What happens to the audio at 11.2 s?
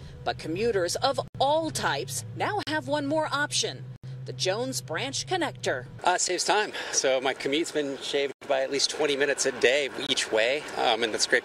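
Nothing goes wrong at 11.2 s; the audio plays through that moment intact, with no dropout, click or distortion.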